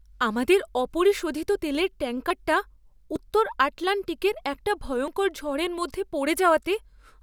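At 2.30, 3.16 and 5.08 s the speech skips forward, each time losing roughly 40 ms. There's no gap, just a jump straight across. That's likely a dropped buffer (overrun), where the recorder didn't read its samples before the hardware overwrote them.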